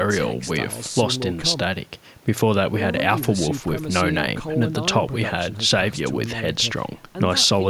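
Nothing in this recording of speech stands out as a technical fault; it runs along without any dropouts, glitches or other problems worth flagging.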